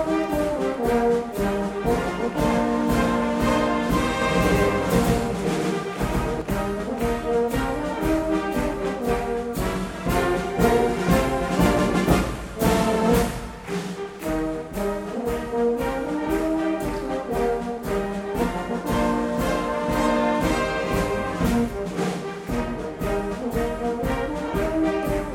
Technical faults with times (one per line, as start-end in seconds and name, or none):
4.22-6.42 doubled audio track